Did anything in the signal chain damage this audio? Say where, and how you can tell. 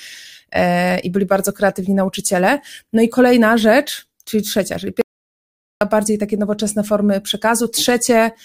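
Yes: an audio dropout to silence, likely a lost input link with silence written, blanks 5.01–5.81 s after "rzecz czyli trzecia czyli", leaving no room tone.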